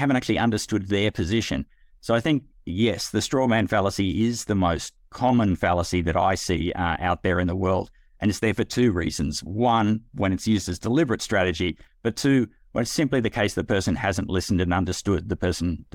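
No audible technical faults.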